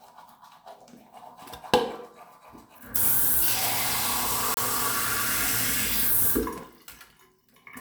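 At 4.54 s the sound cuts out and stays silent until 4.58 s. It then picks up further along, as though it had kept playing through the gap, so roughly 28 ms of material is missing. This is likely a Bluetooth dropout: audio data did not reach the headphones in time and was discarded, and the output held silence until good data arrived. A gap this short fits a couple of lost packets.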